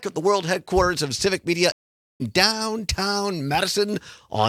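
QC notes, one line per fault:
1.72–2.22 s, stream reconnect: the audio drops out for 0.48 s, then comes back roughly a third of a second further on than where it stopped, so a bit of material is skipped. That's the connection breaking and the player restarting its decoder mid-stream.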